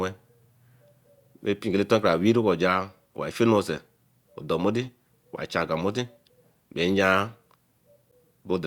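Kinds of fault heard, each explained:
Gap between stream segments: the timestamps of two adjacent segments, which fits segments about 1 s long, leave a hole of 11.3 ms that playback fills with silence, giving one hard-edged dropout in the speech at 8.11 s. No audio is lost, only delayed.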